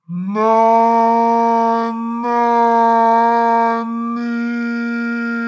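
From start to finish the sound plays at half speed and a full octave low, sluggish and deep: a wrong sample rate, played back at half the rate it was captured at, which fits 32 kHz audio read out at 16 kHz.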